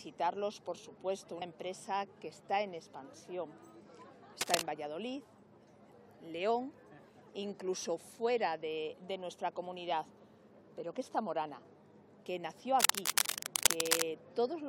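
A worn cable, connector or control was likely disturbed, its contact resistance fluctuating rapidly and causing cable scratch noise: dense, uneven scratching bursts, somewhat louder than the audio itself, from 4.41 to 4.62 s and again from 12.80 to 14.04 s.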